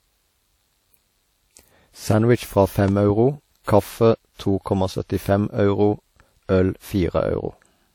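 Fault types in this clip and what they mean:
transcoding between lossy codecs: Two kinds of compression artefact overlap, likely from a low-rate WMA encode re-encoded as MP3. Nothing sounds above 19.5 kHz.
loud pop: Two sharp pops land between 2.88 and 3.12 s, about 5 dB above the speech, which continues underneath. A voltage spike is the likely cause.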